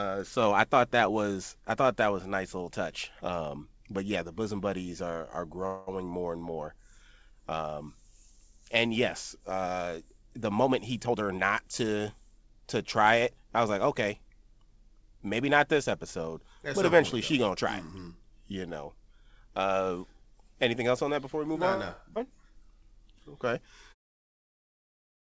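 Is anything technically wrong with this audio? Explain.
Yes, this speech clip, which has come through a G.722 call path with nothing above 8 kHz, has four timing faults from packet delivery and jitter-buffer handling.

A call audio freeze runs from 5.66 to 5.89 s, right after "bosom buddies are are" and before "more and more". Packets were most likely held up in transit, so the jitter buffer ran dry. The receiver filled about 210 ms by stretching the last sound into a fading buzz or hiss. Playback then resumes where it stopped, so nothing is lost but the timing is pushed back by that amount.

A jitter buffer speed-up follows at 11.06 to 11.29 s, just after "uh the moment he". The buffer held more audio than it wanted. To catch up, the receiver cut out roughly 100 ms of short pitch-period pieces, so the speech runs at about 136% speed with its pitch unchanged and sounds hurried.

A skip ahead comes at 11.37 to 11.40 s. 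Roughly 70 ms of audio was discarded while later packets were already waiting, and only about 5 ms was filled across the join. Playback jumps forward almost directly, clipping part of a sound.

A jitter buffer slow-down runs from 11.62 to 12.03 s. To rebuild its reserve, the buffer repeated single pitch periods or bits of pauses and added 43 ms. The speech runs at about 91% speed with the same pitch, so sounds are slightly drawn out.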